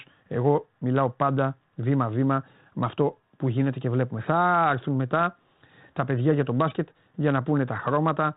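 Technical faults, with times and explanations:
No technical faults are audible; the speech carries only the light coloration expected of G.726 ADPCM at 32 kbit/s.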